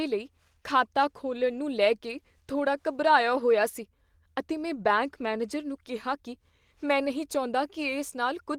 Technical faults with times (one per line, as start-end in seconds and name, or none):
1.37-1.59 lost packet rebuilt from error correction
4.75-4.89 lost packet rebuilt from error correction